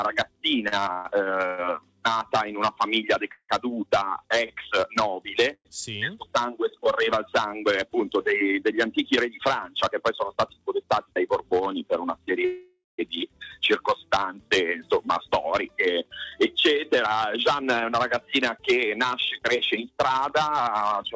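From 0.68 to 3.51 s there's a run of repeated stalls, a stutter. Six times the jitter buffer runs dry and the receiver stretches the last sound to cover, about 0.47 s in all, the longest hold 166 ms. Nothing's lost, but the audio lurches and drags.

At 5.54 to 5.67 s comes a short call audio freeze: the sound hangs on as a fading buzz for about 112 ms, about 60 ms of it silent, then picks up where it stopped. A delayed packet run likely emptied the buffer.

Between 10.83 and 11.60 s there's a jitter buffer speed-up. The receiver trims tiny pitch-period slices to shed the backlog, running at 108% and dropping roughly 70 ms. Pitch stays put, but it sounds briefly rushed.

A longer freeze hits from 12.45 to 13.00 s, about 536 ms of held, fading sound with roughly 160 ms of silence in it, before the audio resumes without anything missing.

The second speed-up runs from 17.07 s to the very end at 106%, shaving about 0.3 s, so the tail feels a bit hurried. 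Through all of this the G.722 call path cuts off everything above 8 kHz.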